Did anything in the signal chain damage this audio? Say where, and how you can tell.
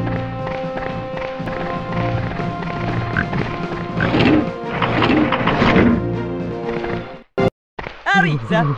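Yes. A doubled audio track runs from 1.46 to 5.84 s, likely from a second, slower capture path or an edit holding two out-of-step copies. A full-band duplicate trails about a second behind at roughly equal level, with no decay or room colour, starting and stopping abruptly.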